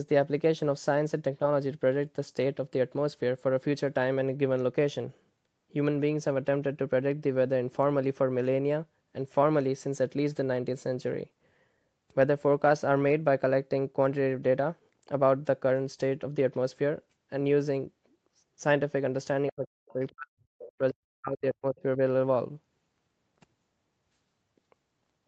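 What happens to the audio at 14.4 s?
Nothing goes wrong at 14.4 s: the speech there passes through intact, with only the ordinary call microphone processing shaping it, its high-pass filter trimming the lowest bass and nothing reaching above 8 kHz.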